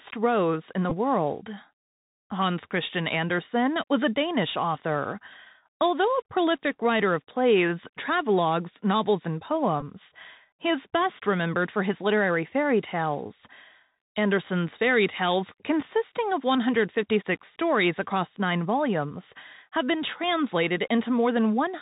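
A speech clip carried over a Bluetooth headset link. Throughout, the narrowband sound points to the Bluetooth CVSD headset codec at 64 kbps. Nothing above 4 kHz survives. The one-bit delta coding cannot keep up with sharp, loud high sounds, so sibilants turn scratchy and a grainy hiss sits under the voice. Two Bluetooth headset packet repeats also occur. The first runs from 0.90 to 0.94 s, right after "in the". The second runs from 9.81 to 9.83 s, after "plays travelogues novels and". Each replaces about 15 ms of audio, which fits four lost packets. The headset chip replays the last good packet's bits every 3.75 ms. This gives a short buzz near 267 Hz until fresh packets arrive.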